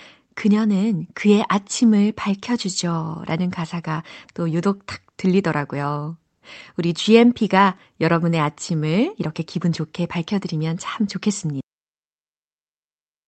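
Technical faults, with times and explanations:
11.61 s, cut-off end: straight after "기분 좋게 밝혀드리면 참", the speech stops in the middle of a sound and the rest of the clip is flat digital silence. The final buffers never reached the output, so nothing rings out or fades. The waveform drops from speech level to a flat silent line. On a spectrogram, the energy (already capped near 8 kHz by the call codec's band limit) ends in a sheer vertical edge, followed by uniform black.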